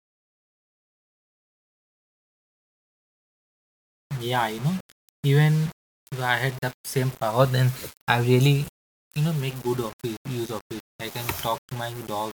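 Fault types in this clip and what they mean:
Low bit depth without dither: across the whole speech clip, the audio has a grainy distortion that follows the signal, sitting around 20 dB below it. Quiet passages sound gritty and the faintest tails sputter or drop out. This likely comes from rounding to about 6 bits with no dither.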